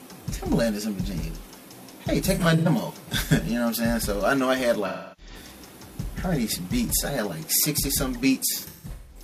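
The audio suffers AAC frame loss with concealment at 2.25 to 2.68 s, 4.87 to 5.35 s, and 8.52 s to the end. The decoder patched the gaps from the last good spectrum, giving smeared, phasey patches: about 170 ms lost across 340 ms in the first, 300 ms in the second, and 384 ms across 512 ms in the last. On a spectrogram these show as blurred, frame-wide blocks, and the waveform's envelope dips where runs lengthen.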